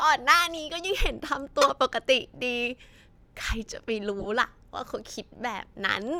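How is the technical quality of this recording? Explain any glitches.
Three corrupt frame decoded glitches interrupt the speech, at 0.55–0.60 s, 1.61–1.70 s and 4.19–4.26 s. Flipped bits in compressed frames were played anyway, scattering energy across a few frames each. They sound like chirps, squeaks, blips or bursts of noise peaking near -30, -5 and -20 dBFS, seen as brief vertical smears on a spectrogram and spikes in the waveform.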